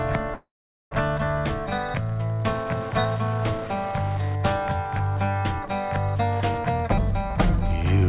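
A nearby Wi-Fi radio is being picked up and rectified by the audio circuit, so Wi-Fi interference ticks steadily every 102.4 ms throughout, roughly 25 dB below the sound. A call audio freeze, likely from delayed packets draining the jitter buffer, fills 0.34 to 0.93 s with a fading continuation, then about 0.43 s of silence, before the audio resumes where it stopped with nothing lost. Through the call path, the band stops at 4 kHz, which fits a G.711 codec at 64 kbps.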